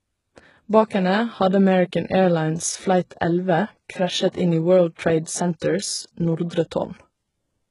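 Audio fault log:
Throughout: HE-AAC compression. The speech is heavily coded, likely HE-AAC at a very low bitrate around 12 kbps. Treble is rebuilt from copied lower bands rather than carried intact, so s sounds come out gritty and lispy, with a metallic sheen. On a spectrogram the upper band looks smeared and repetitive, with harmonics that fail to line up across the crossover and nothing at all above about 11.1 kHz.
0.36 s, 4.32 to 4.35 s, 4.95 to 4.99 s, 6.49 to 6.51 s: pre-echo. Before each sharp onset, a brief hiss arrives early, spreading 13, 30, 36 and 20 ms ahead of the attack. This happens because coding noise sized for the loud onset is spread across the whole block and fills the quiet moment before it, leaving the attack soft and smeared. A waveform shows a fuzzy ramp ahead of each transient, and a spectrogram shows broadband noise leading the onset.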